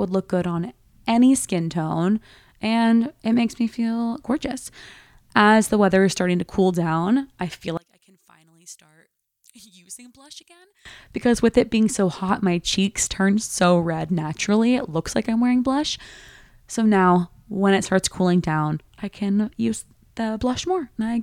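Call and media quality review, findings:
Speech drops to a faint residue, 7.77–10.85 s, after "cool down I feel", until "because with it being". Level about 27 dB down. Likely one channel inverted: mono sum cancels the shared centre signal. Waveform collapses to a sliver; spectrogram fades across the band, leaving a pale trace.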